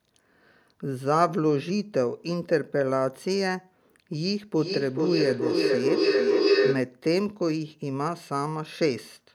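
From 4.54 s to 7.0 s a feedback howl builds. Sound from one loudspeaker reaches a microphone on the same call and loops back louder each pass. It narrows to a tone near 400 Hz, the loop repeating about every 0.4 s. At its peak it is about 3 dB above the speech.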